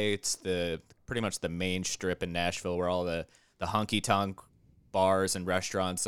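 No technical faults are audible.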